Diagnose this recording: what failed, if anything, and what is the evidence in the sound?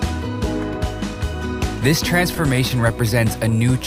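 Between 2.19 and 2.72 s the sound drags and stutters through five brief holds, each at most 12 ms and about 44 ms in total, with nothing lost. This is repeated stalls (stutter) at the network stage: late packets kept draining the jitter buffer, and the receiver extended the last sound until data arrived.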